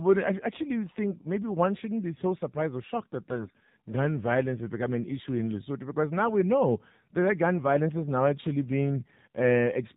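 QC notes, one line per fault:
Throughout: AMR narrowband mobile codec. The speech is carried at a bitrate that sounds like 7.4 kbps AMR-NB, and the damage is plainly audible. The vocal-tract model with sparse pulse excitation makes the voice buzzy and synthetic, and nothing above 4 kHz survives the 8 kHz sampling. On a spectrogram, energy stops at a hard ceiling at 4 kHz and the harmonics look smeared. The waveform envelope looks normal.
3.30–3.58 s: AMR bit errors. Between "surprised or shocked that" and "gun violence has become", about 0.28 s of speech turns hoarse, scratchy and gargly while its pitch and loudness hold. The unprotected bits were corrupted at a rate of around 4 percent. Excitation pulses land in the wrong places and the fine gain and spectral values drift. On a spectrogram the harmonic stripes break into irregular, noisy texture below 4 kHz, and the waveform shows jagged, uneven cycles at roughly the same level.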